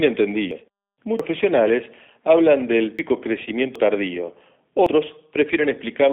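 Speech comes through a G.729 codec the whole way, so it's squeezed into a phone band of roughly 250 Hz to 3.6 kHz with nothing above 4 kHz. At 8 kbit/s the speech is rebuilt from a filter, pitch and sparse pulses, which leaves it plainly rough and a bit synthetic. On top of that there are five points with the sound jumping ahead at 0.51, 1.2, 2.99 (just after "hablan del"), 3.76 and 4.86 s, each losing around a tenth to a third of a second with no gap. That's most likely a dropped buffer (overrun), where samples got overwritten before they were read and the two sides were spliced straight together.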